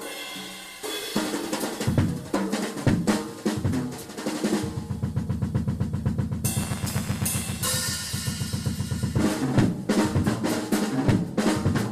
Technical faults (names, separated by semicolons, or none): buffer tearing